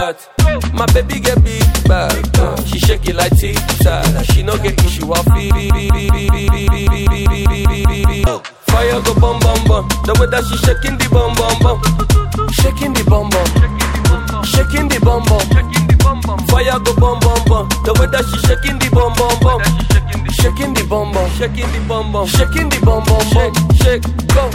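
From 5.51 s to 8.27 s the audio falls into a broken-record loop: a fragment of about 195 ms repeats exactly, back to back, 14 times, giving a stuttering mechanical pattern that lasts nearly 3 seconds. This points to a stall in the player, encoder or stream, which likely kept resending the last fragment it held instead of fresh data. Whatever audio belonged in that stretch is missing, and normal playback resumes after 8.27 s.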